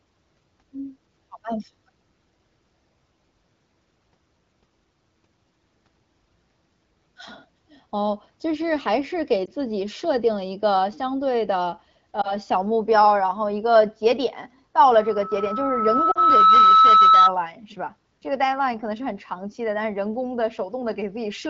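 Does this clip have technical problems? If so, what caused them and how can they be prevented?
Yes. Lost AMR speech frames cause brief dips near 9.45 to 9.49 s, 12.22 to 12.35 s, and 16.12 to 16.18 s, where two frames go missing. Radio errors corrupted these frames. The decoder filled each gap by repeating the last good speech settings at fading gain. Stronger radio coverage or better error protection prevents this.

A loudspeaker feedback squeal runs from 14.84 to 17.34 s. A steady 1.3 kHz tone swells over about a second and a half until it sits about 10 dB above the speech. The microphone was picking up its own loudspeaker, and the loop gain exceeded one at that frequency. Lowering the loudspeaker gain, moving the microphone away, or notching 1.3 kHz prevents it.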